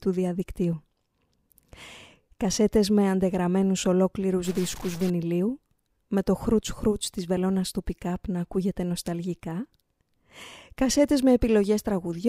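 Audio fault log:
4.45 to 5.10 s, stuck bit: right after "με αντεγραμμένους ολόκληρους" the speech turns harsh and buzzy for about 0.65 s, and the quiet gaps fill with a gritty noise instead of falling silent. This is likely one data bit held at a fixed value, so roughly half the samples are pushed off by a step near -35 dBFS, in a pattern that follows the waveform's sign. Unlike clipping, the grit stays audible at low levels, not just on loud peaks.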